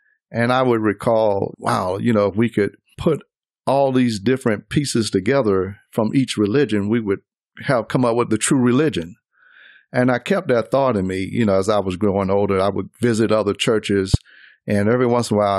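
At 14.14 to 14.17 s, close to the end of the speech, a single loud pop lands on top of the recording, peaking around 15 dB above the surrounding level. It is most likely a voltage pulse from a plug, switch or static discharge entering the signal path. It differs from a dropout or an edit click because the speech carries on underneath without a gap, and the burst is the sharp pop or thump of an electrical transient.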